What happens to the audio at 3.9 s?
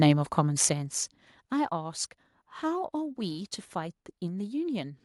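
At 3.9 s the speech is intact, with no dropout, distortion or other fault audible at that point.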